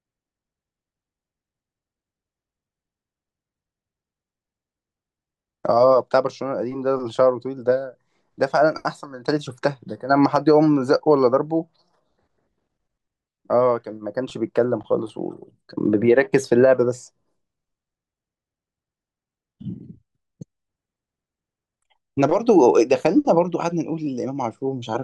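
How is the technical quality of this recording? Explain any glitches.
There is one glitch, at 9.47 s: a sudden skip where a tiny slice of the speech, roughly 20 ms, drops out and the sound on either side is joined with no gap. It is the fault known as audio missing between chunks. The likely cause is a recorder handling the audio in blocks and losing a moment while closing one block and opening the next. Its position fits a chunk length of about 10 seconds.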